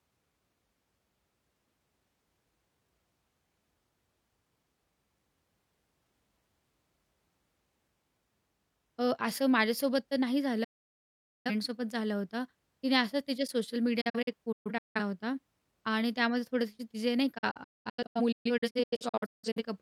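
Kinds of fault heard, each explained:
Digital broadcast dropout: the receiver mutes while frames are lost. The speech cuts out near 10.6 s, 14.0 s and 17.4 s, the later two in scattered holes.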